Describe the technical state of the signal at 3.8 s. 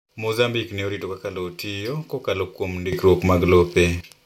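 At 3.8 s the speech sits well above its surrounding level, and the background noise is raised along with it. This is a sudden gain jump lasting from 2.93 s to 4.01 s, starting just after "lowo tiyo kokalo kuom". The level rises by about 12 dB in one step and falls back just as abruptly. The likely cause is a digital gain change applied instantly from one sample to the next, with no ramp to smooth it.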